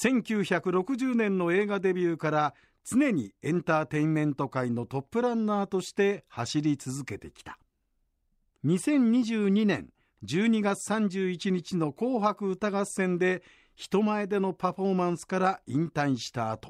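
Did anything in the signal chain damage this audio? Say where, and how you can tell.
No, nothing in this speech recording stood out as damage from any stage of the signal chain on listening.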